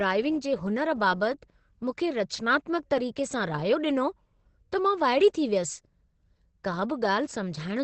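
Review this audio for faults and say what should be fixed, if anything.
Opus compression damage runs throughout the clip: the speech sounds muffled and hoarse, with nothing above 8.7 kHz and heavy codec damage. This likely comes from Opus in its speech (SILK) mode. At a very low rate the encoder narrows the bandwidth to wideband and models the voice coarsely instead of coding its fine detail, which fits a bitrate of around 12 kbps. To prevent it, encode at a higher Opus bitrate so the codec keeps full bandwidth and spends enough bits on the voice.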